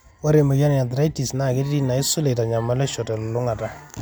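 No technical faults can be heard in this recording.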